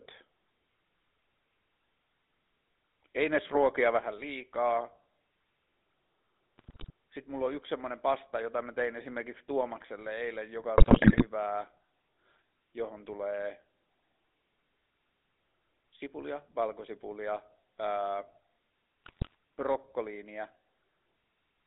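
Speech, carried throughout by the GSM full-rate codec. The line passes roughly 250 Hz to 3.7 kHz, and the voice has a plainly audible buzzy, gravelly roughness. From 3.21 to 3.84 s the loudest syllables crackle harshly, likely microphone overload, with peaks flattened at about 4 dB over the converter's limit. At 3.99 s the voice and background drop suddenly by about 6 dB, likely the sound of the microphone volume stepped down after that distortion. GSM bit errors break the voice into squawks, pops and gargling at 6.58 to 6.90 s, at 10.78 to 11.24 s just after "eilen joka", and at 19.04 to 19.35 s. Corrupted filter, pitch and gain values bend the spectrum and level frame by frame.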